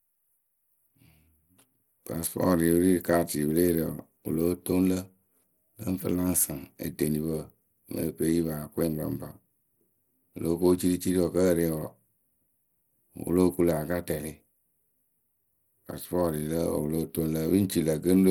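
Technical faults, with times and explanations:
Throughout, Bluetooth SBC compression: gritty speech with nothing above 19.7 kHz, likely SBC coarsely quantising its sub-bands at a bitrate that sounds like about 96 kbps.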